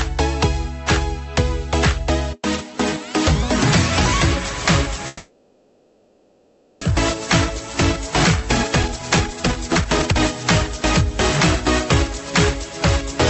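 From 5.07 to 6.87 s the sound smears into a fading buzzy hiss that settles into a low steady noise rather than true silence. That points to a long network dropout as the likely cause. When the sound resumes, about a second of material is simply gone.

Later, from 8.76 to 10.20 s, comes the jitter buffer speed-up. The receiver had built up roughly 0.7 s of extra delay and trims it by cutting tiny pitch-period slices. Playback runs at about 142% speed with unchanged pitch, so it sounds noticeably rushed. Throughout, the top end stops around 8 kHz, which fits an Opus call path at 64 kbps.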